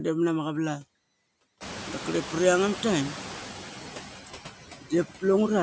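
Throughout the clip, the delta-sigma converter runs without dither, so small input levels drive it into repeating bit patterns. These converter idle tones sit about 35 dB below the speech, around 2 kHz. In the pauses they come through as a faint, thin whistle, and under quiet stretches of speech they turn into a fine grainy hiss instead of smooth background.

A noise suppressor is also working across the whole clip, pulling down the bands it judges to be steady noise by about 8 dB, frame by frame. Between words the background sinks, then swells back up underneath the voice once speech begins.

From 1.6 s to 3.42 s the suppressor is catching up. The room noise jumps by about 21 dB at roughly 1.5 s, and the suppressor's noise estimate trails behind that rise. For those 1.82 s the louder background passes with only about 4 dB of reduction. It then settles lower as the estimate adapts to the new level, though the noise stays about 14 dB below the speech.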